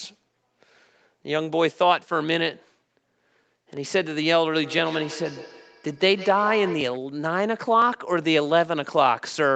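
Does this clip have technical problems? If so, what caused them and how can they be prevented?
Yes. Between 4.63 and 6.98 s, two devices in the same room were joined to the call, so one played out what the other's microphone captured, and that microphone picked it up again. Each device's echo canceller only subtracts its own playback, so this loop went uncorrected. The result is feedback echo between two devices: the speech returns at a fixed interval of roughly 150 ms, thinner and more ringing with each pass, peaking at about 14 dB below the speech. To prevent it, join only one device per room, or mute the microphone and speaker on every extra device.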